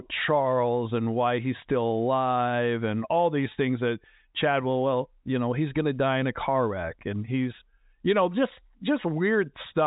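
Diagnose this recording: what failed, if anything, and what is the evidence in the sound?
Nothing failed in this recording.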